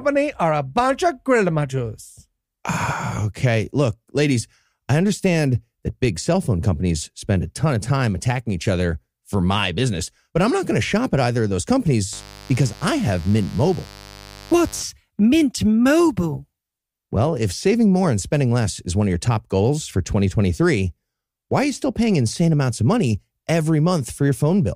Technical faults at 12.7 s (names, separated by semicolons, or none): mains buzz